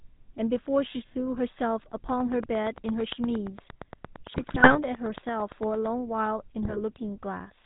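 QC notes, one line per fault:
throughout: GSM full-rate codec. The speech has the plainly audible buzzy, gravelly roughness of the first GSM coder, which fits a 13 kbps full-rate stream. The vocal tract is modelled and excited by sparse regular pulses, and nothing above 4 kHz survives, so the top end is dull and coarse.
4.34–4.77 s and 6.62–6.79 s: GSM bit errors. Both stretches break into squawks, pops and gargling. The errors corrupt filter, pitch and gain parameters in the decoder, so the spectrum warps and level jumps frame by frame. The first burst is longer and heavier, the second shorter.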